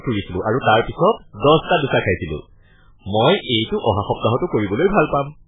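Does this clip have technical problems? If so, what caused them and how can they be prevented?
Yes. This speech has heavy damage from what is likely MP3 compression, running the whole way through. Everything above 3.8 kHz is gone, so the sound is dull and muffled. The encoder is short on bits, so it cuts the treble at a fixed point and drops the weaker frequency components, which then flicker in and out from frame to frame and give a watery, swirling texture. Damage this severe points to an extremely low bitrate, around 8 kbps. To prevent it, keep the original uncompressed file, or encode at a much higher bitrate such as 128 kbps or more.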